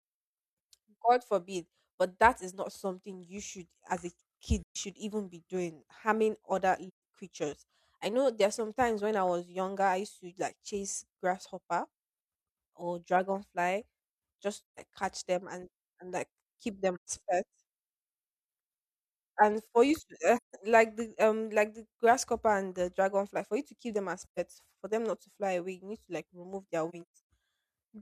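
Speech with AAC frame loss and muting: soft-edged dropouts at 4.63 s (after "you should as a"), 6.88, 14.58, 16.95, 20.36, 24.25 s (after "to keep them as"), and a broken patch at 26.89–27.16 s after "to like remove their". Lost frames decode as silence, and overlapping windows fade each hole in and out.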